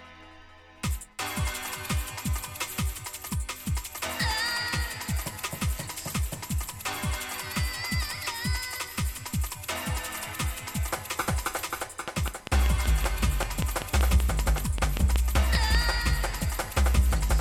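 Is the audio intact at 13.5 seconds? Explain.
No. From 12.08 to 15.76 s, a train of clicks runs through it, likely from interference or a faulty connection injecting pulses. About twenty similar clicks arrive regularly at 5.18 per second, standing roughly 20 dB above the sound as a steady, prominent ticking.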